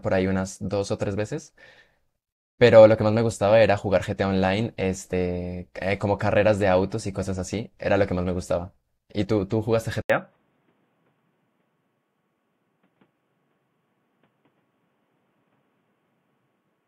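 At 5.12 s the speech jumps forward. This is compressed frames skipped: about one frame, roughly 20 ms of audio, was never played, which fits a frame length of 21.3 ms.

From 10.02 s to the end, after a silence of 80 ms, the speech turns dull and boxy, with nothing above 3.8 kHz and a faint new noise floor about 50 dB down, at much the same level. The likely cause is the input switched to a poorer device.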